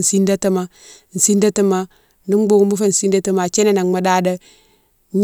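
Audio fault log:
Nothing to log here, as the speech comes across without a single fault worth a line.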